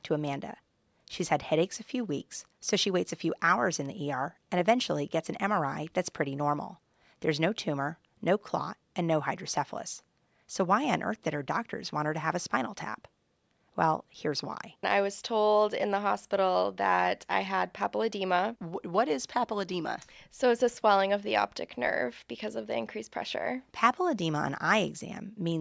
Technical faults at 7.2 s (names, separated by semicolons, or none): none